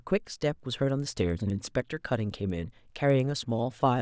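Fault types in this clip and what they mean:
Resampler restarted on every block: the speech was converted from 44.1 kHz down to 16 kHz one 100 ms block at a time, with the converter's filter memory thrown away at each boundary, so every block edge carries a small discontinuity. The result is a steady tick at 10 Hz that rides on the speech and vanishes in pauses. A spectrogram shows thin vertical broadband lines every 100 ms during sound, and the waveform shows small kinks at those boundaries.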